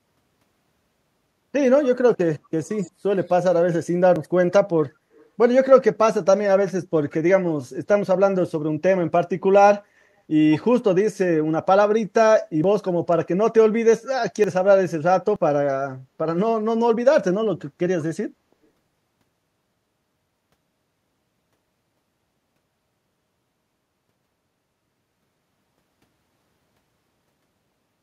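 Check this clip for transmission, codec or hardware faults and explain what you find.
Two kinds of fault are audible in this speech: a faint echo leak on two occasions and four short skips from dropped buffers.

Echo leak occurs at 2.63 to 2.91 s and again at 5.14 to 5.28 s. A delayed copy of the voice trails the original by 165 ms, about 25 dB down in the first instance and about 35 dB down in the second, so it sounds like a quiet scrap rather than a clear repeat. The likely cause is a far end using a loudspeaker whose echo canceller did not fully suppress what its microphone picked up.

Dropped buffers (overruns) are heard at 4.16, 12.64, 14.44 and 15.36 s. Each is a small jump in the sound, with no gap of silence, because roughly 20 ms of audio is missing and the surrounding material is spliced together directly. This likely comes from the capture side failing to read its samples before the hardware overwrote them.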